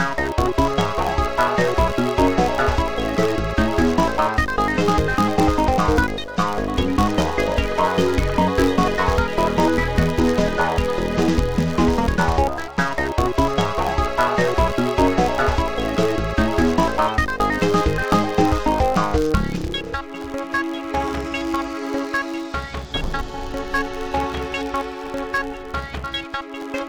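A filter restarted on every block runs throughout: each block starts from silence, leaving a 93.8 Hz buzz that tracks the level, which fits 512-sample blocks.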